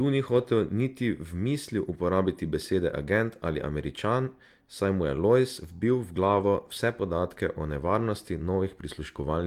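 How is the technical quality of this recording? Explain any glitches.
Three short rough patches break into the speech, each a lost packet rebuilt from error correction. At 0.33–0.43 s (before "niti v mislil uporabiti"), 6.23–6.45 s (between "vbil v" and "vse podatke") and 7.99–8.05 s, the sound turns grainy and noisy but never drops out. The decoder filled each loss with a low-bitrate copy carried in the next packet. That copy is coarser, so about 60, 120 and 40 ms of sound come back rougher rather than silent.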